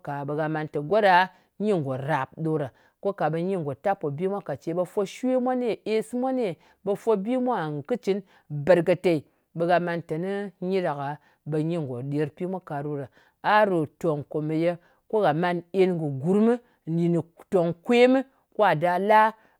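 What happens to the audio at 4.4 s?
Nothing goes wrong at 4.4 s; the speech carries on intact through that moment.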